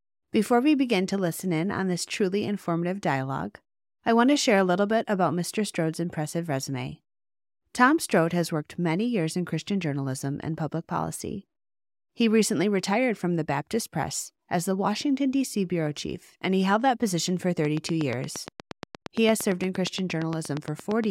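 From 17.65 s to 21.05 s there's a train of clicks, around 30 evenly spaced pops at about 8.6 per second, sitting roughly 10 dB above the speech. The likely cause is interference from nearby equipment or a faulty connection or power supply.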